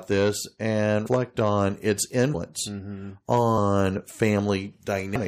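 Speech with compressed frames skipped at 1.06–1.08 s, 2.33 s and 5.14 s. Each time the sound jumps ahead, dropping roughly 200 to 300 ms, which fits several missing 23.2 ms frames.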